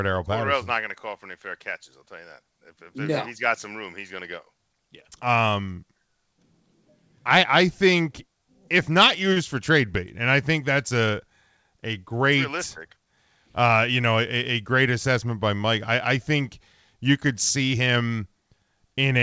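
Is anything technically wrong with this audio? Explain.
Yes, there is one brief fault in this speech clip, heard over a call path whose codec leaves nothing above 8 kHz.

Short stall from a late packet, 9.33 to 9.37 s, just after "I think if not". A packet arrived late, the jitter buffer ran dry, and the receiver stretched the last sound for about 32 ms until the data caught up. Playback then resumed from the same point, so nothing is lost, but that instant is held slightly too long, with a faint buzzy or dipped quality.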